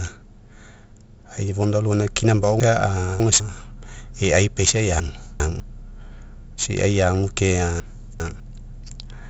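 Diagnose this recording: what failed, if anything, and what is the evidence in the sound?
The codec stage failed: 4-bit ADPCM compression at heavy damage runs through the entire recording. Every louder stretch of speech carries a gritty hiss that rises and falls with the level, and sharp onsets sound distorted because the adaptive step size lags behind fast changes. Nothing is present above 7.7 kHz, which points to a reduced sample rate of roughly 16 kHz, consistent with a 64 kbps 4-bit stream, and explains the dull top end.

Three moments show chunks out of order, a fault in packet reassembly or write buffering. In each, a 200 ms block plays after blocks that should follow it, leaving a jumbled stretch with hard joins. At 2.6 to 3.4 s the displaced chunk arrives three chunks late. At 5.0 to 5.6 s and 7.8 to 8.4 s it is two chunks late. No audio is missing; the sequence is wrong.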